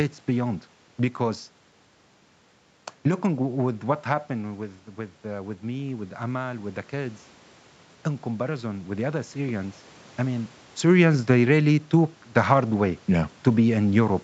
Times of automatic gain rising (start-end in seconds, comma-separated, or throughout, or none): 4.30-7.27